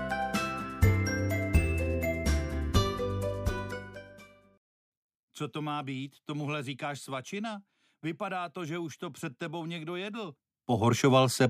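Near the end, from 10.26 to 10.91 s, a fast ticking zipper noise rides on the audio as its level moves by roughly 15 dB. The change is applied in unsmoothed 1 dB steps, around twenty per second, each leaving a small click.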